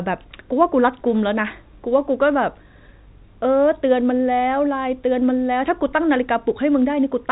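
Nothing stood out on listening to this speech clip, which carries the narrow telephone bandwidth of G.711 coding with nothing heard above about 3.8 kHz.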